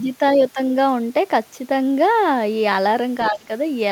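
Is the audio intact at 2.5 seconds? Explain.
Yes, at 2.5 seconds the speech plays through intact, with no dropout, click, distortion or other fault at that moment.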